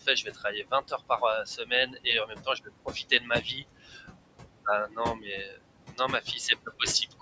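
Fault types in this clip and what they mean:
Noise suppressor artifacts: The suppressor treats the steady room noise as something to remove and pulls it down by about 21 dB whenever it decides nothing else is there. That room noise sits only about 10 dB under the speech to begin with, so you hear it drop away in the gaps and come back up under the talking. That pumping background carries on for the whole clip.
Speech cut by the noise suppressor: In places the suppressor mistakes quieter bits of speech for noise and turns them down along with the background. This happens from 0.01 to 4.19 s (about 21 dB at worst, roughly a second and a half affected in total), from 4.53 to 5.61 s (about 22 dB, under half a second), and from 5.92 to 6.27 s (about 18 dB, brief). The softer sounds come across swallowed or faint.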